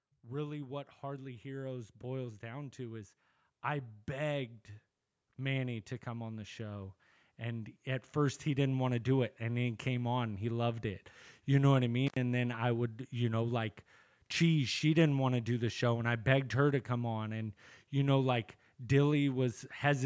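Automatic gain rising runs from 0.05 s to 8.83 s. The gain control judged the incoming speech too quiet and kept raising its gain over nearly nine seconds, by about 14 dB in total. Because the gain acts on everything the microphone picks up, the speech and the background noise grow louder together, a slow swell rather than a sudden jump. The top of the band stops at 8 kHz throughout, as expected from the call's microphone processing.

An intermittent contact breaks the signal from 12.07 s to 12.17 s. A loose cable or plug briefly lost connection, and the line stayed open for about 82 ms. The speech drops out abruptly, with a short crackle as the contact breaks and again as it reconnects. During the gap only a faint residual hiss remains, and then the sound returns at its previous level.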